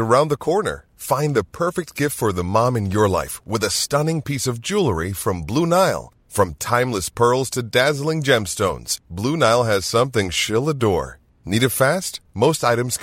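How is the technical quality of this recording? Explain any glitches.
No technical faults are audible.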